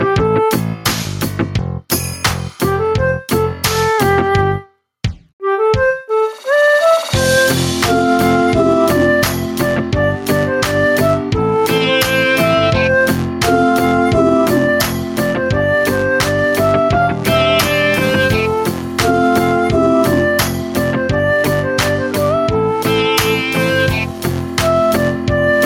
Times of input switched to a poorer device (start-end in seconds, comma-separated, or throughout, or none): none